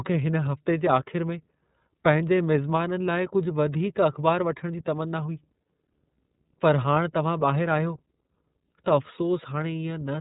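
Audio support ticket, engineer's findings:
iLBC codec, whole clip: nothing above 3.8 kHz, plainly rough, synthetic speech. Unlike a simple low-pass, excitation is coded per frame, pointing to the 30 ms, 13.33 kbps mode.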